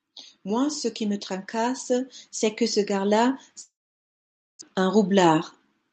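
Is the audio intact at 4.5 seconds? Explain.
No. At 4.5 s the sound is inside a long network dropout running from about 3.61 s to 4.63 s. Just after 3.61 s the last sound is stretched into a fading buzzy tail, and then roughly 0.88 s of near silence follows. The likely cause is that packets stopped arriving, so the receiver concealed the gap and then gave up. About 0.94 s of audio is never heard, and playback resumes slightly shifted in timing. On a waveform this looks like a decaying smear collapsing to a flat line. A spectrogram shows a blurred, fading band and then an empty block, with energy only below 8 kHz once sound returns.

At 4.5 s the automatic gain is also rising. It climbs steadily from about 0.05 s to 5.47 s by about 9 dB in total, because the control judged the input too quiet and kept raising its gain. Both the sound and the background floor swell together. On a waveform the envelope widens gradually across the clip. 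A spectrogram brightens evenly at all frequencies rather than at any single band.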